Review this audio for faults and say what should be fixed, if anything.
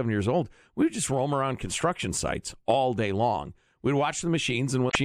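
Near the end of the speech, from 4.87 to 4.96 s, there is a brief burst of damaged data in a compressed stream. For about 80 ms the decoder reads corrupted frames, loses sync and has to hunt for the next valid frame header, which produces a short chirp or blip. On a spectrogram this shows as a smeared broadband patch. The waveform shows a sudden change in shape with no gradual onset. To prevent it, transfer and store the file with checksum verification so corrupted frames are caught and resent before decoding.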